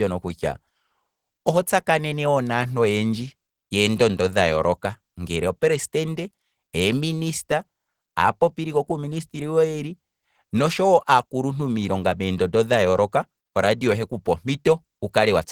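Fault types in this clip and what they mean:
Opus compression: the speech sounds muffled and hoarse, with rough, grainy texture rather than swirling, which is likely Opus coding in its hybrid speech mode at a starved bitrate around 16 kbps; the band still reaches about 20.4 kHz, yet the damage is plainly audible throughout.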